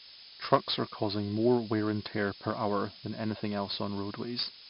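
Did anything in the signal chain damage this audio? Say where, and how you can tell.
Yes. A thin, steady hiss rises sharply toward the top of the band for the whole clip and sits nearly as loud as the speech. This is low bit depth with noise shaping at sample-format conversion: requantising to what sounds like a 5-bit word, with the rounding error pushed upward.

Every louder syllable carries gritty, level-following hiss, and attacks distort throughout. Nothing is heard above 5.3 kHz. This is heavy 4-bit ADPCM compression at the codec stage, at a rate that points to about 44 kbps. The step size can't track sharp transients, and the low sample rate dulls the sound.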